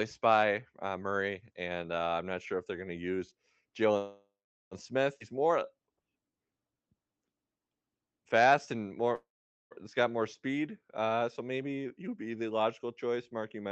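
Speech carried over a call path whose Opus coding cuts the spectrogram off at 8 kHz. It shows two call audio freezes, likely from packets held up until the jitter buffer ran empty: at 3.97–4.74 s (0.74 s inserted, about 0.4 s of it silent) and 9.15–9.74 s (0.56 s, about 0.45 s silent), each a fading smear then a blank gap before speech resumes intact. A skip ahead at 5.19–5.23 s drops roughly 0.2 s of speech, a visible splice with almost no gap in the waveform. Jitter buffer slow-down from 5.33 to 7.13 s plays at 87% speed, adding 233 ms through repeated pitch periods that show as stretched, evenly repeating harmonic stripes. Jitter buffer speed-up at 11.85–12.15 s runs at 112%, trimming around 40 ms and visibly compressing syllables without shifting pitch.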